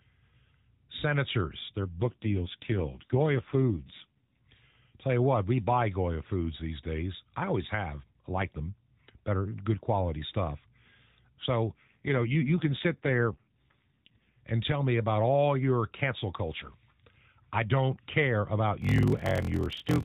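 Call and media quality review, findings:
AMR rate drop, 1.8–4.4 s and 11.7–14.3 s (second ends just before "and tell me about"). Voice turns rougher, more synthetic. Bandwidth unchanged, no gap. Sound fits the AMR-NB mode stepping down from 12.2 to 5.9 kbps, bits shifted to error protection, then restored.

Block size mismatch (padded), 18.8 s to end, after "I don't care about". Buzz at 43.1 Hz. Playback slowed to 0.861x, timbre unchanged. Fits a downstream stage reading 1024-sample blocks, short writes zero-padded, inserting a gap per block.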